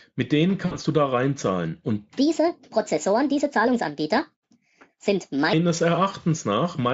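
At 0.65 s, about 60 ms of audio is missing, which fits three lost 20 ms packets. The result is VoIP packet loss concealed by the speech codec. The decoder keeps repeating its last pitch and spectral shape at falling gain, so the gap becomes a fading, stretched sound rather than silence. Because each rebuilt frame feeds the next, the speech stays thin until about 0.79 s, just before "du da reinzahlen". A plain dropout would leave a clean hole instead.

From 2.19 s to 5.53 s, a section at the wrong speed plays 1.46 times too fast. That raises the pitch roughly seven semitones and hurries the delivery. The likely cause is playback against a mismatched clock. A pitch-shift effect would move pitch alone, but here tempo and pitch jump together at the boundaries and both return abruptly at 5.53 s.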